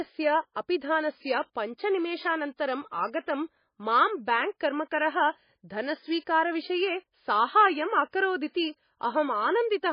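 Throughout, the speech shows heavy damage, likely from MP3 compression: nothing remains above 5 kHz, and s sounds turn watery and chirpy as weak frequency lines flicker from frame to frame. That swirl, absent from a plain low-pass filter, points to a bitrate near 19 kbps.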